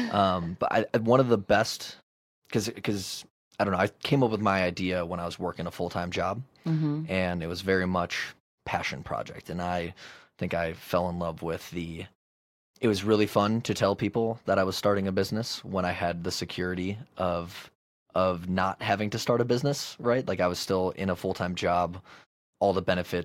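No technical faults are audible.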